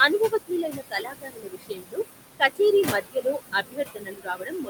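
Right from the start there are noise suppressor artifacts running through the whole clip. The suppressor is pulling down whatever bands it judges to be steady noise, by about 19 dB, and it re-decides every frame. With the room noise sitting only about 8 dB under the speech, it has to work hard, so the background dips in the gaps and swells back under the speech.

It also bites into the speech itself, which is speech cut by the noise suppressor. From 0.29 to 1.99 s, roughly a second's worth of material gets treated as noise and dropped by up to about 21 dB, so soft consonants and tails sound swallowed. There's a brief repeat from 2.38 to 2.6 s, about a tenth of a second. From 2.92 s to the end the same thing happens again.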